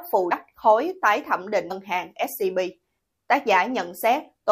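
Twice the audio lurches forward, at 0.30 s and 1.70 s, dropping roughly 100 ms and 150 ms of material. These are compressed frames skipped: whole compressed frames never played, consistent with a 23.2 ms codec frame.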